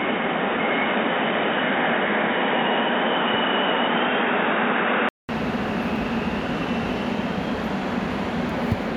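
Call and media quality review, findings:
Dull, boxy sound 0.0–5.29 s, nothing above 3.8 kHz, then full bandwidth returns after a 200 ms gap. Likely cause: input switched to a poorer device (band-limited mic or headset call profile), then back. Spectrogram: hard ceiling near 3.8 kHz until 5.29 s, blank column at the switch. Waveform: flat gap, level shift of about 5 dB across it, different noise floor roughly 45 dB under the signal beforehand.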